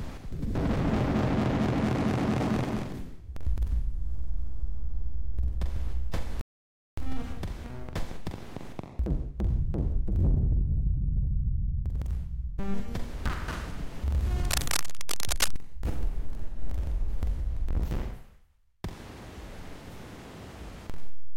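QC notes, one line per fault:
6.41–6.98 s, rebuffering stall: the sound cuts to silence for about 0.56 s, then resumes exactly where it stopped. Playback ran out of data, so nothing is lost but time is added.
14.4–15.56 s, cable scratch noise: dense, uneven scratching rides over the sound, only a little below its level. This is likely a worn cable or connector being moved, with contact resistance fluctuating rapidly.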